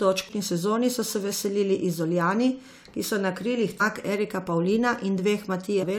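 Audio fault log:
0.29 s, 3.80 s and 5.82 to 5.84 s, damaged data in a compressed stream: brief blips, just before "sezoni so se veselili", just after "ki so na krilih", and near the end. Corrupted bytes make the decoder misread frames, lose sync and hunt for the next valid header.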